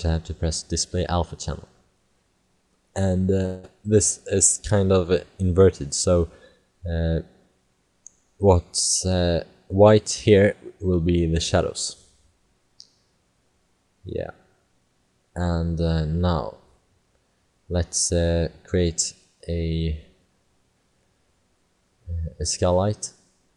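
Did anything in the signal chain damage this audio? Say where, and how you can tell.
Yes. From 3.45 to 3.65 s the sound smears into a buzzy, fading continuation for about 0.18 s, then resumes with that stretch simply gone. It's likely a long network dropout, where the receiver's concealment papered over packets that never arrived.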